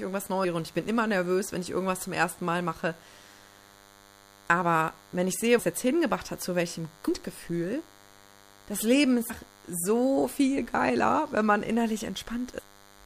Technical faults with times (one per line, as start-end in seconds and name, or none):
0.00-13.05 DECT cordless phone buzz
0.43 compressed frames skipped
5.58 compressed frames skipped
7.07 compressed frames skipped
9.29 compressed frames skipped
10.57 compressed frames skipped
12.58 compressed frames skipped